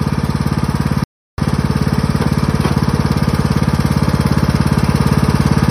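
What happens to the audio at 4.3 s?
Nothing goes wrong at 4.3 s; the audio is intact at that moment.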